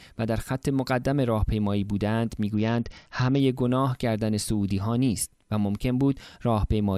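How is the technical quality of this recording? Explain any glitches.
One glitch, a Bluetooth SBC bit pool drop, affects the speech from 2.54 to 3.40 s. The link's bit budget collapsed, which fits the bit pool falling from 28 to 8 (around 72 kbps). Upper sub-bands lose their bits and the rest quantise coarsely, so the sound turns dull and gritty until the rate recovers.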